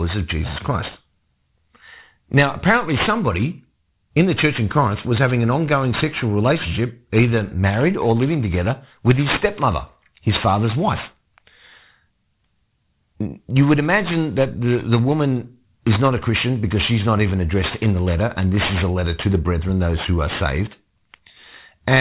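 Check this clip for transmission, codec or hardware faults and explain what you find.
One fault runs through the whole speech clip: aliasing. The audio sounds downsampled without a low-pass filter, which points to 8 kHz. Energy above 4 kHz folds back down, leaving gritty, metallic sibilants, with the aliases roughly 15 dB below the signal.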